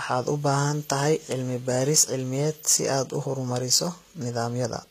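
Throughout, the speech carries plainly audible codec damage: the treble is bright yet synthetic, s sounds turn gritty and metallic, and nothing reaches above 14.9 kHz. The likely cause is HE-AAC compression at a rate fitting about 20 kbps, with treble rebuilt from copied lower bands.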